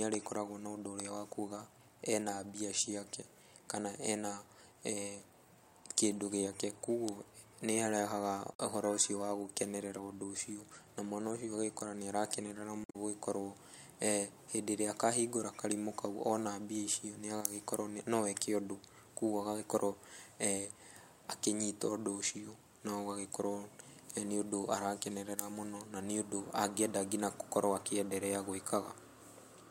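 At 8.50 to 8.60 s and again at 12.82 to 12.96 s, damaged data in a compressed stream makes the decoder misread corrupted frames and hunt for the next valid header, giving a brief chirp, squawk, click or short hole.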